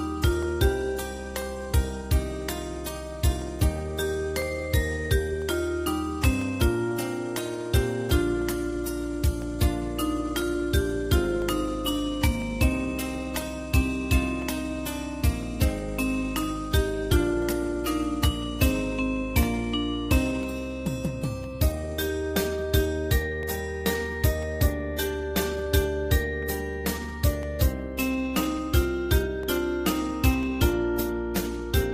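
Periodic USB or driver dropouts, 0.43 s to 31.43 s: a blocking task silences roughly a millisecond every 1.0 s, heard as regular ticks.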